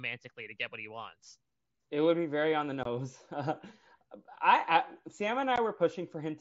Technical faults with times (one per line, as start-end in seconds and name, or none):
2.83-2.86 unconcealed Bluetooth headset packet loss
5.56 unconcealed Bluetooth headset packet loss